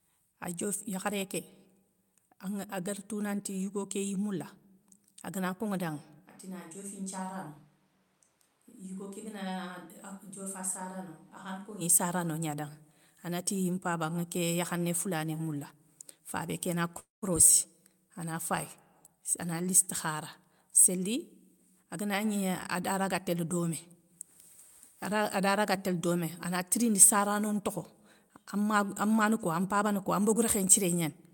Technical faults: switch to a distant microphone; call audio freeze; jitter buffer speed-up

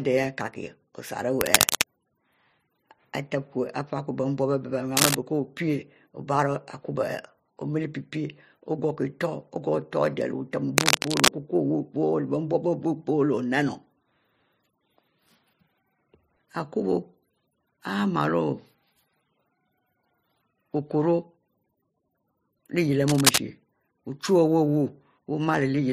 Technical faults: cable scratch noise

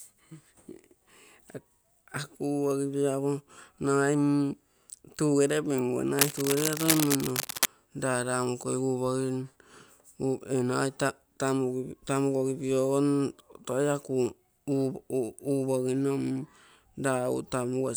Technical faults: cable scratch noise

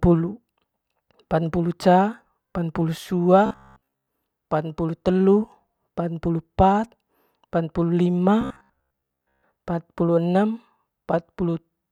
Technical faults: robotic sound from repeated short buffers

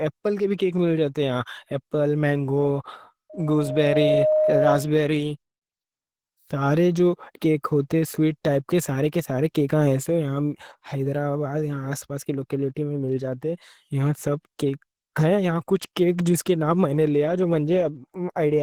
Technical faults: Opus compression; loudspeaker feedback squeal

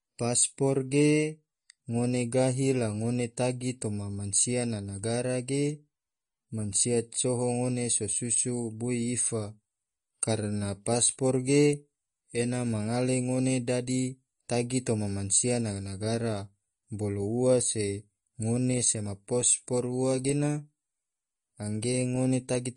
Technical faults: MP3 compression

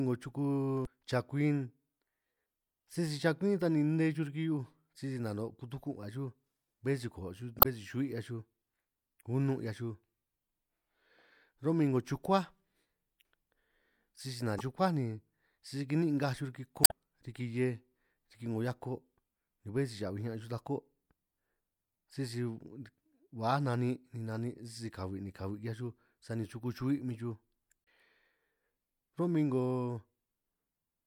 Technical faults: damaged data in a compressed stream

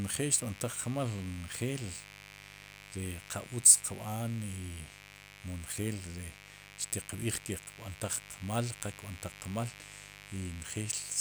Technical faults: mains buzz

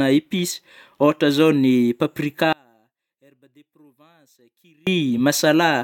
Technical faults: one channel inverted

